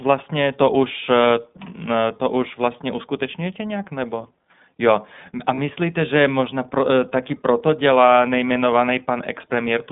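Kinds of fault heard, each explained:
iLBC codec: The whole clip has passed through this narrowband VoIP codec. The speech sits in a band from about 150 Hz to 3.6 kHz, with a plainly rough, synthetic edge, consistent with iLBC's 20 ms mode at around 15.2 kbps.
Lost iLBC frames: At 5.54 to 5.60 s, just before "že možná pro taky", a 40 ms gap is filled with a short held, slightly buzzy vowel-like sound. The decoder repeated the last pitch cycle with noise, and clean speech returns immediately.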